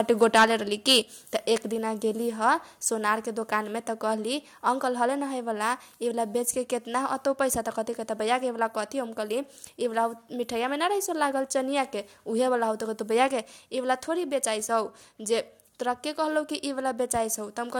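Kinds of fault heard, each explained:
microphone overload: harsh crackle on peaks at 0.22–0.45 s and 0.88–0.98 s, about 6–7 dB over, likely from input gain driving the converter past full scale.
microphone volume stepped down: sudden level drop of 4 dB at 1.02 s right after the distorted peak, likely software cutting the microphone's input gain in one step.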